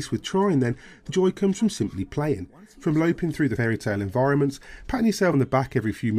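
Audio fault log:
1.08 s and 5.32 s: compressed frames skipped. Audio jumps ahead roughly 50 ms, then 70 ms, suggesting two and three missing frames.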